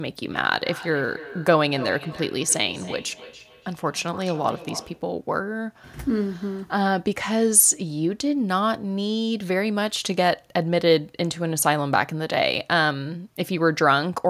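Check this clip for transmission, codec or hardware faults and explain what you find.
One fault is present: feedback echo between two devices, from 0.32 s to 5.08 s. Each stretch of speech comes back as a thinner, ringing copy roughly every third of a second, peaking at about 17 dB below the speech. Two devices in the same room are joined to one call, and one device's loudspeaker plays what the other's microphone sent. That microphone picks it up again, and neither echo canceller removes sound played by the other device.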